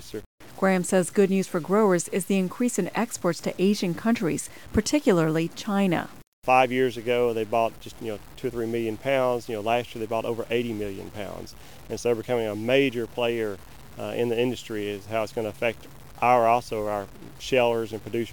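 Throughout the clip, the signal was likely reduced to a very coarse resolution, consistent with about 7 bits, by simply cutting off the lower bits with no dither to randomise the error. This is low bit depth without dither: the rounding error tracks the waveform instead of forming a steady hiss, sitting only about 25 dB below the sound. Quiet passages turn gritty and grainy, the faintest parts sputter or drop out, and the distortion shifts with the sound.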